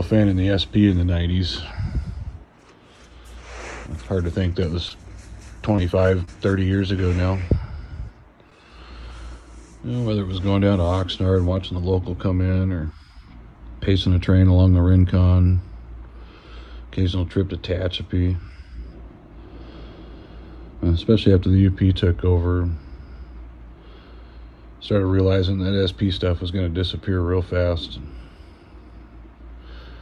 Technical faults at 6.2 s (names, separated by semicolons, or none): repeated packet loss (robotic sound)